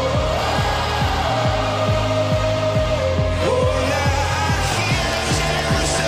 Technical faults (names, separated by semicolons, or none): block size mismatch (truncated)